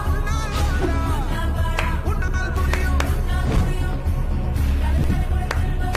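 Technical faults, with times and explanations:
2.22–2.34 s and 4.98–5.10 s, chunks out of order: each spot sounds like a brief jumbled moment. Two 60 ms chunks play swapped, the earlier one arriving one chunk late, so nothing is lost but the order is wrong, with hard joins between mismatched chunks.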